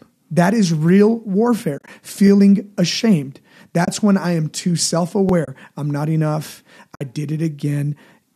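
From 1.78 to 1.88 s, AAC frame loss with muting: the decoder zeroed the missing frames, and the overlapping windows fade the sound out and back in. About 70 ms drops out in soft-edged holes scattered over 100 ms, none longer than roughly 30 ms. At 2.27 s, overlapping chunks: a new processing chunk began before the previous one ended, so about 20 ms plays twice, heard as a brief stutter. It recurs at the next join, 5.29 s, three seconds later. The same muted frame loss returns at 3.85 s, just before "when I am too", and at 5.45 s, just before "I'm not enough", each a 30 ms soft gap. That spacing fits 10 ms frames, likely from a low-delay AAC stream. A last 60 ms hole falls at 6.95 to 7.01 s, right after "I'm not enough".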